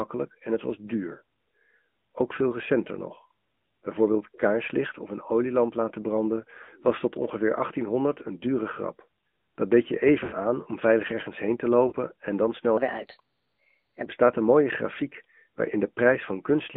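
Throughout, the AMR narrowband mobile codec confines the speech to roughly 150 Hz–3.5 kHz, giving a buzzy, synthetic tone; a spectrogram shows an empty band above 3.5 kHz, and the damage fits a mid-rate mode near 10 kbps.

Lost AMR speech frames occur at 6.64–6.70 s after "een olielamp laten branden", at 10.24–10.34 s after "deed je", and at 11.88–11.94 s before "en dan". Each is a smeared, fading warble, with waveform amplitude sagging briefly.

From 12.77 to 14.06 s, a section at the wrong speed runs 1.22 times fast, about three semitones high, likely from a clock mismatch; spectrogram harmonics shift upward.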